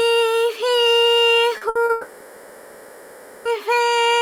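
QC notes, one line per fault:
1.57–1.63 s and 1.85–1.91 s, short concealed packet loss: about 40 ms of audio arrived too late each time, so the receiver extended the preceding sound to cover the hole and blended back. Each gap is heard as a brief smear or wobble.
1.69–1.77 s, burst of packet loss: several consecutive packets, about 60 ms in all, never played. The receiver carried the last sound forward and faded it down, giving a held buzz or hiss before the audio resumes with that stretch missing.
1.91–3.47 s, long network dropout: no usable audio came through for about 1.54 s, likely because the network connection stalled. The receiver kept synthesising from the last sound across the whole gap, with no true silence, and the audio resumes later with that stretch gone.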